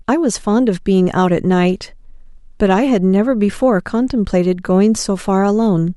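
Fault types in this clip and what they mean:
No faults can be heard anywhere in this speech recording.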